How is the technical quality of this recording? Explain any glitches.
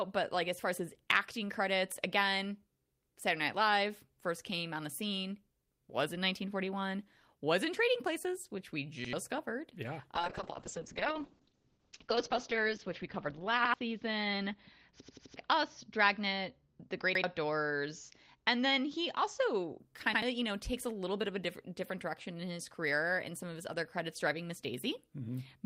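The recording has two kinds of glitch. There are repeated stutters and a long stretch of degraded, muffled sound.

Repeated buffer at 9.05, 13.65, 15.02, 17.15 and 20.14 s. New audio arrived late, so the last buffer played again. Each repeat lasts about 85 ms, which fits a 4096-sample buffer. It sounds like a hard-edged stutter. At 15.02 s the piece repeats four times, to 15.36 s, and about 300 ms of audio is lost.

Call bitrate drop from 10.17 to 19.85 s. The bandwidth estimate fell, and the encoder dropped from 32 to 7 kbps. Coding grows coarse, and the top end is cut from 20 kHz to 8 kHz. The speech turns rough and muffled, worst for about 2.2 s.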